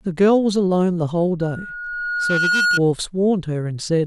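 A speech recording with loudspeaker feedback squeal from 1.41 s to 2.8 s. A 1.4 kHz tone swells over roughly a second until it is about as loud as the speech. That self-building swell marks a mic-to-speaker loop, unlike a steady interfering tone.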